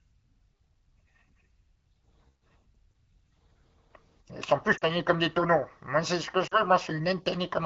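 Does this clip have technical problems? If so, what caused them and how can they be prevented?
Yes. At 4.78 to 4.90 s, and again at 6.47 to 6.62 s, the speech briefly drops to near silence, then comes back weak or rough for a moment. These are lost AMR speech frames. Radio errors corrupted about 40 ms of data each time, which fits two 20 ms frames. The AMR-WB decoder, running at 12.65 kbit/s, bridged each gap by repeating the last good pitch and vocal tract settings at falling gain. Better radio coverage, or a link with retransmission or redundant frames, would prevent these dropouts.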